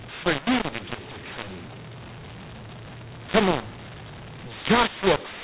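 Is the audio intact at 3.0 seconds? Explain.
No, at 3.0 seconds it's damaged, like the rest of the clip. It's a mu-law and A-law mix-up: mu-law telephone samples are decoded as A-law, so levels get scrambled. The speech sounds harsh and distorted, and quiet stretches fill with noise.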